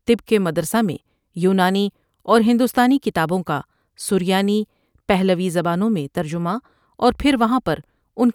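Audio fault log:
No fault can be heard anywhere in this speech recording. There is nothing here to log.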